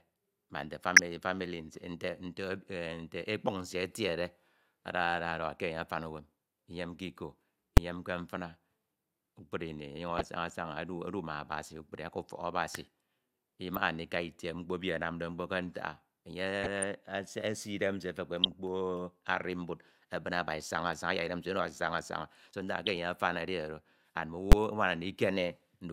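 Brief DAB burbling occurs at 0.96 to 0.99 s, then at 7.77 s invalid numbers at full scale: an invalid calculation result pins the output to its limit, giving one loud bang, consistent with a 256-sample block. Burbling returns at 10.10 to 10.25 s, 16.63 to 16.83 s, 18.44 to 18.52 s and 22.86 to 22.99 s. Weak-reception bit errors, around a few tenths of a percent, corrupt the MP2 data, so short blips of noise appear in single sub-bands. At 24.52 s a second full-scale bang, from a roughly 512-sample block, appears.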